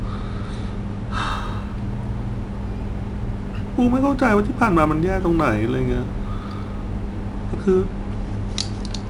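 Throughout the speech, 4-bit ADPCM compression codes each sample as a coarse step from a prediction, at a rate that points to roughly 89 kbps. The result is plainly audible gritty hiss that tracks loud passages, with nothing above 10.6 kHz, so the top end sounds dulled.

From 1.31 to 7.36 s, sample clock jitter of around 2 microseconds makes the converter sample slightly early or late at random. Steep, bright parts of the waveform pick up an error roughly 40 dB below the signal, heard as added roughness that fades in pauses.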